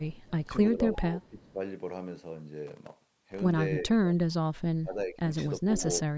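A speech recording with three kinds of fault. From 0.00 to 0.49 s and again from 0.95 to 1.51 s there is echo leak: a faint copy of the speech returning 356 ms later, some 30 and 35 dB below it respectively. The likely cause is a far-end loudspeaker echo that the canceller did not remove, and the fixed delay separates it from room reverberation. Speech suppressed in double talk appears from 0.45 to 1.6 s, 3.9 to 4.17 s, 4.79 to 5.22 s and 5.59 to 5.83 s, where the level dips by roughly 10 to 25 dB in brief pieces. These likely come from an echo canceller turning everything down while both sides talk, and unlike a network dropout the sound ducks rather than vanishing cleanly. From 2.67 to 3.41 s there is processor overload crackle, a gritty tearing made of about a hundred tiny silent gaps. Their length fits buffers of under a millisecond missing their deadlines. The dense texture that stops once the load passes distinguishes it from isolated clicks or packet loss.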